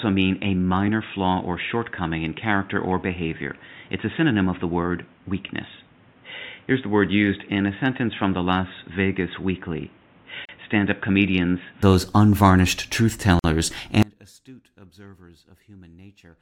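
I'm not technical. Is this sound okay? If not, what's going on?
No, it has three separate problems.

For the first 11.8 seconds the audio sounds like it's coming through a worse microphone: muffled and boxy, with nothing above about 3.8 kHz, a bit quieter, and with its own faint background noise. At 11.8 s, right before "those unvarnished truth", it suddenly opens up and sounds clearer, with no pause at the change. That's an input switched to a poorer device. The most likely cause is the recording picking up a lesser mic or headset at the start and then moving back to the better one.

There are also two tiny holes in the middle of continuous sound: one at 10.45 s lasting about 36 milliseconds, and one at 13.39 s, just after "those unvarnished truth", lasting about 49 milliseconds. Each is a gap at a join of encoded pieces. The recording was saved as separate chunks and stuck back together, and each chunk carried a sliver of blank padding at its edge. 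The audio then picks up right where it left off.

Finally, at 14.03 s the sound abruptly cuts out and stays gone until the end. Only a very faint trace remains underneath. That's an audio dropout to a faint residue. It's not a pause or a fade-out, just a sudden loss, likely because the main signal stopped arriving while the rest of the recording chain kept running.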